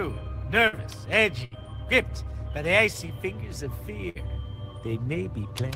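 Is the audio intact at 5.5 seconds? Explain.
Yes, the audio at 5.5 seconds is intact, with no dropout, glitch or other fault at that moment.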